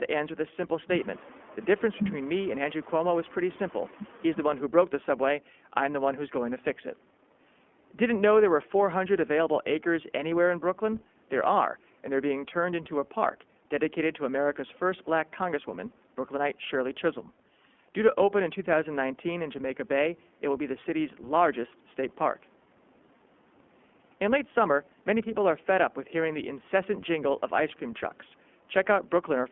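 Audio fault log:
throughout, iLBC codec: the speech sits squarely in the old telephone band, roughly 200 Hz to 3.4 kHz, so everything above that is just gone and the low end is thin too. On top of that there's a plainly audible rough, slightly synthetic edge, because the codec rebuilds each 20 ms frame's excitation on its own rather than carrying detail over from the last one, which fits the 15.2 kbps mode.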